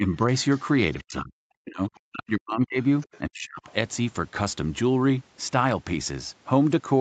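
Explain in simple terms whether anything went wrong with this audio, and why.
Speech suppressed in double talk: the call's echo canceller likely couldn't tell the talker apart from the other person's voice on the loudspeaker, so it turned everything down. There is a slight dip from 0.0 to 0.08 s, then near-silent gaps at 1.01–1.41 s, 1.58–2.78 s and 3.2–3.61 s.

The other side's voice leaking through: the echo canceller likely didn't fully remove the loudspeaker's sound from the microphone, so faint scraps of a second, much quieter voice come through at 0.51–0.62 s and 3.0–3.19 s.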